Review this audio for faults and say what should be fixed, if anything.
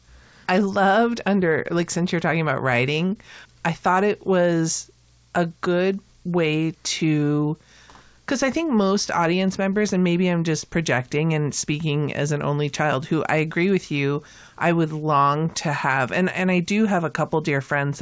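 Nothing in the recording needs fixing. It has passed through a call path, and its sound stops at about 8 kHz, which fits a wideband call codec.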